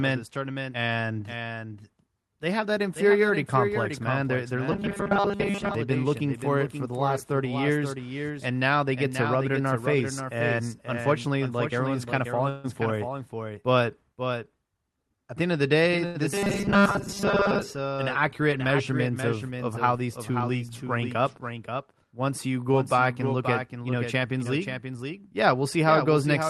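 Throughout the speech, a doubled audio track runs underneath. A second full-band copy trails the original by about half a second, roughly 5 dB quieter, with no room colour or decay. This likely comes from the same signal being captured twice, once through a slower path.

From 4.72 to 5.75 s comes robotic sound from repeated short buffers. The voice turns into a rigid, metallic buzz at 200 Hz, which matches a 5 ms piece being looped. New audio likely arrived too seldom, so most of the real sound was skipped while fragments repeated.

At 12.49 to 12.67 s, right after "like everyone's kind of", there is a call audio freeze. The last sound is held as a fading buzz or hiss for about 145 ms. Speech resumes at "for it" with nothing lost. Delayed packets likely emptied the jitter buffer.

From 14.74 to 15.33 s, leading into "the end of the", a jitter buffer speed-up makes the voice hurry. It plays about 16 percent fast at unchanged pitch. 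About a tenth of a second of pitch periods is trimmed to shrink excess buffered delay.

At 16.06 to 16.17 s, a short stall from a late packet holds one sound for 87 ms, with a slight buzz or dip. A packet missed its slot. The receiver stretched the last audio and then continued from the same point.

Right after "end of the day", from 16.34 to 17.62 s, the 200 Hz robotic buzz returns. It likely comes from 5 ms loops again, with much of the audio skipped. It ends at "an accurate measurement of".

From 25.02 to 25.85 s, a milder speed-up runs about 5 percent fast and removes roughly 50 ms. Throughout, the Opus call codec's coding noise and its top limit near 12 kHz can be heard.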